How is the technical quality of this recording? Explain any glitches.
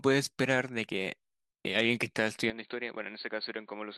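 One fault stands out. From 2.5 s to the end, the speech turns dull and drops about 10 dB. Nothing remains above 4.5 kHz. A faint new background noise appears. There is no gap at the change. This is likely an input switched to a poorer device with a narrower band.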